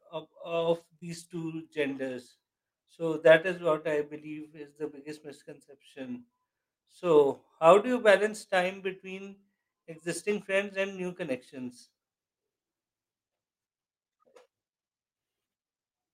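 A cluster of packet damage hits the start of this speech recording, all within its first two seconds. The main fault is lost packets rebuilt from error correction, at 0.55, 0.59, 0.65, 0.79, 1.13, 1.23, 1.35 and 1.73 s. Each lasts 20 ms. In each case the original packet never arrived. The next packet carried a low-bitrate backup copy, and the decoder played that instead. So nothing drops out. Those 20 ms slices simply sound rougher and noisier than the surrounding speech. One loss had no backup to fall back on. This short concealed packet loss sits between 0.99 and 1.03 s. About 20 ms of audio was missing there. The decoder covered roughly 17 ms of it by extending the preceding sound, then faded back into the real signal. It comes across as a brief smear or wobble in the speech.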